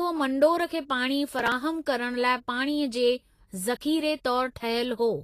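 Right from the start and all the way through, the speech has a grainy, hissy edge, with nothing at all above 14.2 kHz. The codec damage is plainly audible: the treble sounds coarse and noisy instead of detailed, and consonant attacks blur. That's most likely Vorbis compression, where the encoder keeps a smooth spectral outline but quantises the fine detail into noise of similar energy. The amount of damage points to a low bitrate, somewhere around 32 kbps.

Then, from about 1.32 s to 1.52 s, there's a burst of processor overload crackle, a gritty tearing laid over the speech. The processor is falling behind on its small audio buffers, each a few milliseconds long, and missing deadline after deadline, something like fifteen times in that stretch. Every missed buffer gets skipped outright, so the audio jumps forward with a hard edge. Those rapid little skips pile up into the crackle, which stops once the load drops.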